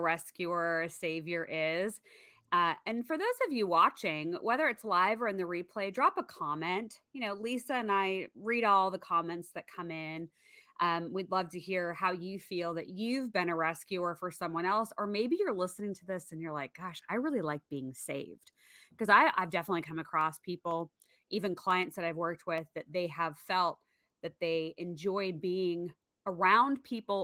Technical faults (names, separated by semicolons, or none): periodic USB or driver dropouts